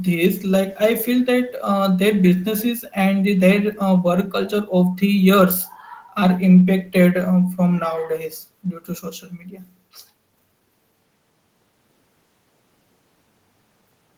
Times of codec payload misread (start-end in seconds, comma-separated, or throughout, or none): none